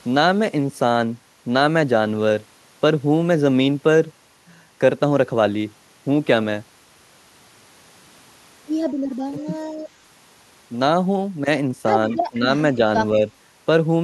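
Speech with two short dips, at 9.27–9.47 s and 12.3–12.48 s, where the voice drops by roughly 15 dB for around 150 ms. That's likely speech suppressed in double talk, with the echo canceller turning this side down while the far end talked. Right before the second dip, at 12.12–12.17 s, there's a faint copy of the voice trailing by 168 ms and sitting about 30 dB under the speech. It's likely echo leak from a loudspeaker end whose canceller didn't quite catch everything.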